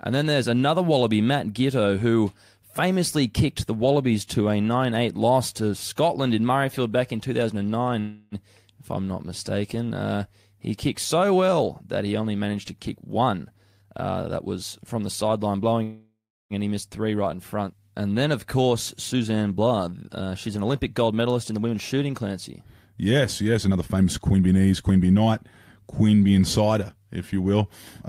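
At 7.99–8.35 s, a call audio freeze: the last sound is held as a fading buzz or hiss for about 0.32 s, likely because delayed packets emptied the jitter buffer. After "only managed to kick", a jitter buffer speed-up runs from 13.22 to 15.73 s at 112%, as short pitch-period pieces are cut to drain excess buffered audio, so it sounds hurried at the same pitch. A second freeze at 15.83–16.53 s fades to silence before "and he missed three". Further speed-ups follow at 18.28–18.73 s (109%), 19.13–22.22 s (110%) and 23.52–25.27 s (119%).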